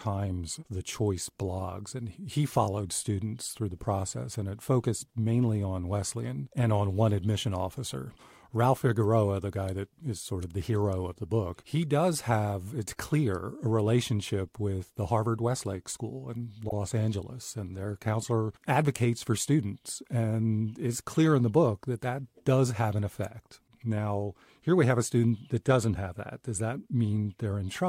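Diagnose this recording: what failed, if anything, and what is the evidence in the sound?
Storage or codec stage: repeated frames at 16.68 to 16.73 s, a quick stutter where a 52 ms chunk, about two compressed frames' worth, plays twice, stretching the speech slightly.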